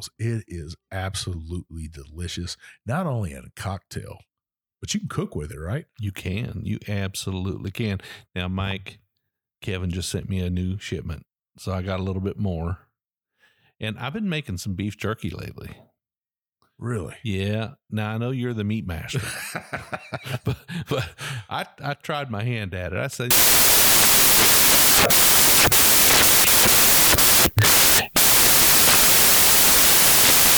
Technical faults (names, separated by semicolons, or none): samples built from the wrong bytes